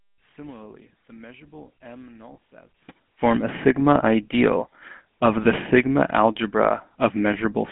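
The GSM full-rate codec colours the whole clip: the speech is confined to roughly 150 Hz to 3.5 kHz, with a plainly audible buzzy, gravelly roughness, which fits 13 kbps coding.

One channel inverted, from 0.00 to 2.89 s, is the likely cause of the speech dropping about 27 dB until just before "form a". Opposite-polarity channels cancel when summed to mono.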